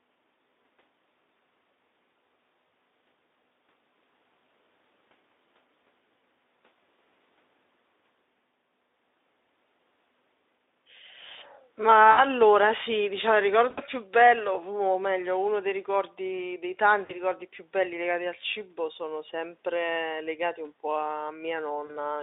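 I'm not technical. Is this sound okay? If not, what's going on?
No. VoIP packet loss concealed by the speech codec occurs at 2.67–2.69, 12.11–12.20, 13.69–13.84, 17.05–17.19 and 21.85–21.99 seconds. Bits of the call went missing, so the decoder guessed by stretching the preceding sound, leaving brief buzzy or blurred, fading moments.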